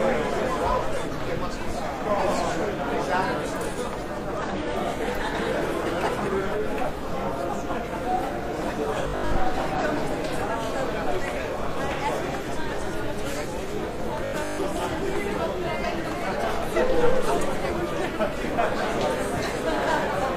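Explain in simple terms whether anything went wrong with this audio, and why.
A couple of things go wrong. There are three short glitches from damaged data in a compressed stream, at 4.37–4.43 s, 9.75–9.80 s and 20.08–20.13 s. At each point the decoder hits corrupted bytes, loses its place and skips ahead to the next frame it can read.

The sound also turns into a stiff, metallic buzz at 9.04–9.38 s and 14.25–14.63 s. This is robotic sound from repeated short buffers. The likely cause is new audio arriving late, so the software loops the last 20 ms or so while most of the real sound is skipped. That loop sets a fixed 50 Hz drone over everything.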